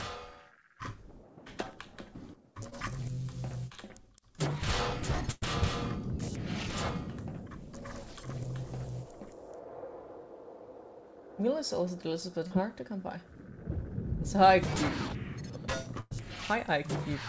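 A call recording that came through a WebRTC path, with nothing above 8 kHz, which fits G.722 at 64 kbps. It has two kinds of network faults. Short concealed packet loss occurs at 2.70 s, where about 20 ms never arrived in time, and again from 12.47 to 12.52 s, where 40 ms went missing. In both places the receiver patched the hole by extending the preceding sound for 17 ms and 32 ms respectively, then crossfaded back, leaving a brief smear or wobble where a short transient can disappear. A burst of packet loss strikes twice, from 5.31 to 5.44 s and from 16.00 to 16.13 s. Each time roughly 100 ms of consecutive audio was lost, and concealment stretched the last sound over 103 ms while turning it down, so a held buzz or fading hiss gives way to about 10 ms of silence before the audio resumes further on, with the intervening material gone.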